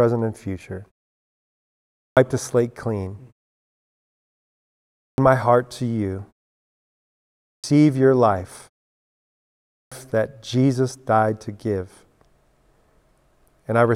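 At 1.83, 4.82, 7.29 and 9.55 s, speech resumes after a pause with a clipped start. The output device sleeps through each silence and wakes late. About 0.34 to 0.37 s is swallowed each time, so "the slate clean", "my heart to you" and "your life" begin abruptly, missing their opening sounds.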